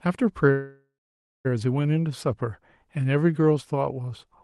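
Speech carried over a call path whose band tops out around 12 kHz, consistent with an Opus stream at about 24 kbps, contains a call audio freeze from 0.51 s to 1.47 s. The sound stalls and the last fragment is stretched into a fading buzz that dies to silence for roughly the final 0.56 s of the hold. The speech then resumes where it stopped, so nothing is lost, but about 0.93 s of delay is inserted. The likely cause is late-arriving packets draining the jitter buffer.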